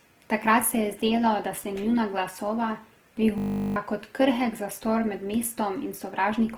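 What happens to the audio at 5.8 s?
At 5.8 s, as throughout, the speech sounds grainy and rough, likely Opus compression filling bit-starved bands with noise, fitting a bitrate near 16 kbps.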